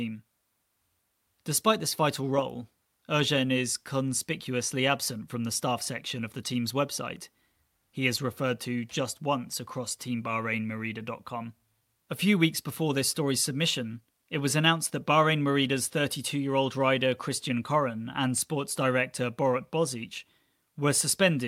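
Nothing in the recording stood out as a technical problem on listening.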